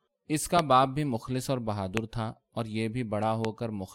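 A loud pop lands at 0.59 to 0.61 s, with two more of the same kind at 1.97 to 1.99 s and 3.45 to 3.47 s. Each is a single sharp click lasting about 20 ms, peaking roughly 20 dB above the speech, which continues unbroken underneath. The cause is likely a brief voltage spike, from a connector, switch, static discharge or driver glitch, entering the signal path and being shaped by the downstream circuitry into an audible transient.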